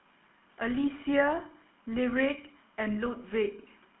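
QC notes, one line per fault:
throughout, GSM full-rate codec: plainly buzzy, gravelly speech from the coarse pulse excitation, squeezed into about 250 Hz to 3.4 kHz, which fits a 13 kbps coder.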